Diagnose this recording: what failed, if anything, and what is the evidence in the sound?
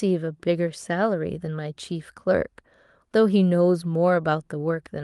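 Nothing stood out on listening to this speech recording, which carries the band limit and light coding texture expected of an Opus call path.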